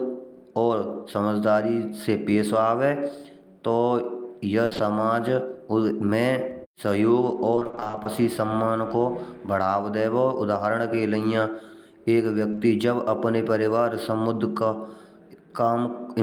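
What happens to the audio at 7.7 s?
Repeated packet loss (robotic sound) runs from 7.55 to 8.07 s, just before "सम्मान को". Thirteen short gaps, none longer than 20 ms, are each patched by extending the preceding sound. Half the stretch is concealed this way, leaving it choppy with pieces missing.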